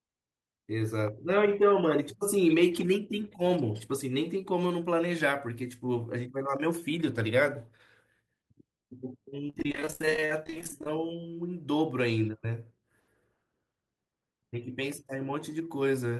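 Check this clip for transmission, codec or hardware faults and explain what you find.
One transmission fault shows up, riding on a call codec whose top end stops around 12 kHz. From 9.47 to 10.97 s there's repeated packet loss (robotic sound): dozens of gaps up to 44 ms, each patched by stretching the last sound, leaving choppy speech with bits missing.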